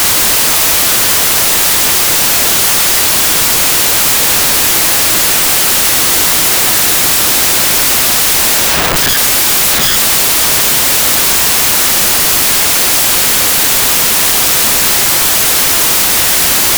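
From start to finish the music suffers a wrong sample width: 16-bit data read as packed 24-bit samples. Most values mix bytes from neighbouring samples, so loud noise buries the music, which plays about 1.5 times too fast and correspondingly higher in pitch.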